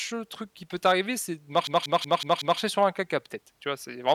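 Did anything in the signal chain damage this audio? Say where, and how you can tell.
Yes, at the driver and buffer stage. From 1.67 to 2.60 s, just after "peut t'arriver c'est de", the speech locks into a machine-gun stutter: one fragment of about 186 ms repeats five times at roughly 5.4 Hz before normal audio resumes at "sur un caca". This is a system hang loop. The host or driver stalled while the audio hardware kept replaying the same ring buffer, which fits an 8192-sample buffer. Essentially no audio appears to be lost; it is held and repeated.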